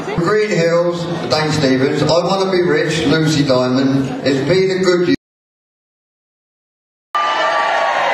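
At 5.15 s the audio drops out to silence and stays there until 7.15 s, about two seconds of dead air with no room tone at all. Sounds like the input likely got cut, a loose device or stray mute, while the recorder kept writing silence, so whatever happened in that gap is simply gone.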